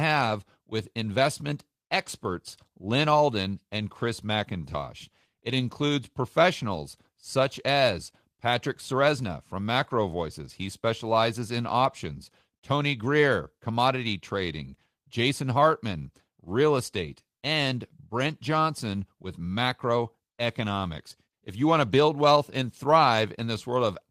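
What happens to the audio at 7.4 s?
At 7.4 s the speech plays through intact, with no dropout, click, distortion or other fault.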